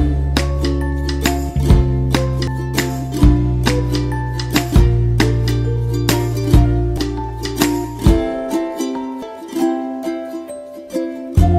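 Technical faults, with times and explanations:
2.47 s, 6.97 s, 9.22 s: audio missing between chunks. At each point roughly a third of a second of sound drops out and the two sides butt together with no gap, a skip that likely comes from losing audio while switching between 2.5 s processing chunks.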